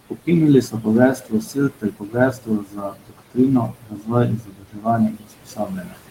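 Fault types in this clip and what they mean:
Noise suppressor artifacts: the suppressor keeps pulling down whatever bands it judges to be steady room noise, by about 19 dB, frame by frame. The background sinks in the gaps and swells back under the speech.
Speech cut by the noise suppressor: it's mistaking bits of the speech for noise and ducking them by up to about 22 dB, briefly at 0.1 and 0.62 s, then across long stretches from 1.15 to 3.38 s and 3.66 to 5.99 s, so soft sounds come out swallowed.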